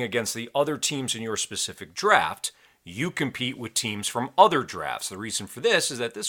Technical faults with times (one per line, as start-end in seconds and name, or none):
1.37-6.09 clock drift buffer slips